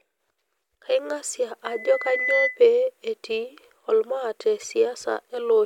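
A microphone in this speech recording is picking up the loudspeaker it feeds. At 2 kHz the gain around that loop climbs above one, so a loudspeaker feedback squeal takes hold from 1.65 s to 2.62 s. The single steady tone swells over most of a second until it sits about 5 dB above the speech, a piercing whistle laid over the talking, and it is gone by 2.62 s.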